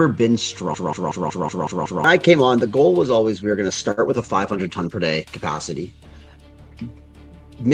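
From 0.74 to 2.04 s, a system hang loop repeats one 186 ms slice about 5.4 times per second, a stutter that fits an 8192-sample buffer and hides about 1.5 s of audio. At 3.91 s, a short stall from a late packet holds the sound for 59 ms, then resumes where it left off with nothing missing.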